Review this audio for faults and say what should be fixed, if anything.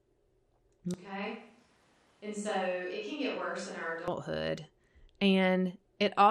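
Low-bitrate MP2 compression throughout: the audio was most likely encoded with MPEG Layer II at a rate near 80 kbps, too few bits for its sub-bands, so upper bands drop out and the rest are coarsely quantised. The speech sounds dull, with a plainly audible gurgling, granular grit. Encoding at a higher bitrate, or with a more efficient codec, would prevent this.

Switch to a distant microphone from 0.94 s to 4.08 s: the close microphone's signal likely dropped out and a farther microphone carried the speech. The sound turns abruptly hollow and roomy, about 10 dB quieter, with room noise roughly 30 dB below the speech, then snaps back. Monitoring the close microphone's feed and fixing it during recording would prevent this.

DAB burbling at 1.07 s: weak reception let bit errors, at a fraction of a percent, slip past error correction into the MP2 data, corrupting samples over a few frames. 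Short blips of noise appear in individual sub-bands. Stronger reception or a cleaner source feed would prevent this.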